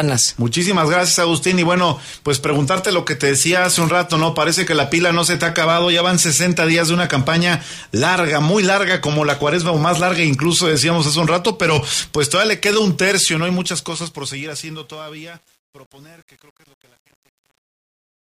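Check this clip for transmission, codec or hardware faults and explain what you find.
There's one fault, and it's on the fade-out. From 13.2 s to the end at 18.2 s there's truncation distortion on a fade. The fade stage keeps too few bits, which fits an 8-bit path, and adds no dither. From 14.15 s on, the tail turns gritty as the waveform breaks into square steps.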